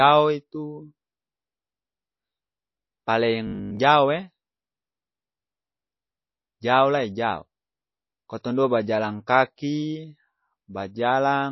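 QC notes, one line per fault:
Throughout: MP3 compression, likely at a very low bitrate, something like 24 kbps. The encoder drops weak frequency lines frame to frame, so the speech sounds watery and swirly, with plainly audible codec damage.
3.47–3.79 s: robotic sound from repeated short buffers. Fresh audio likely stopped arriving in time, so a segment of about 20 ms was replayed for most of this stretch. The repetition imposes a rigid 50 Hz metallic buzz that only loosely follows the speech.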